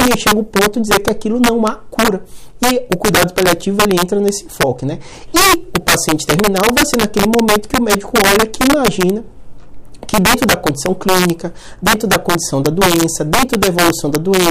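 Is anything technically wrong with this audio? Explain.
Yes. Integer overflow runs through the whole clip: the signal is driven about 6 dB past full scale, and instead of being limited, the few percent of samples that exceed it wrap to the opposite sign, producing violent cracks on loud moments that are far harsher than the flattened buzz of clipping.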